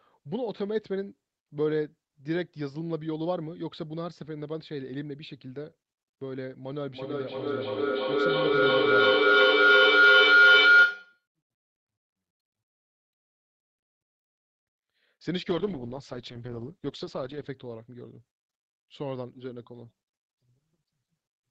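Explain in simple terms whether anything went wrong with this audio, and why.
Two things went wrong.

From 6.87 to 11.27 seconds there is feedback howl. Two devices in the same room were on the call together. Sound from one loudspeaker went back into the other microphone, again and again, getting louder each time. It turns into a high whistle near 1.5 kHz. Each trip around the loop takes about a third of a second, and at its peak it is much louder than the speech.

From 15.51 to 17.61 seconds there is a call bitrate drop. The connection had less room for data, so the call sent the sound using far less detail. For about two seconds the audio sounds rough and watery. Then the quality comes back.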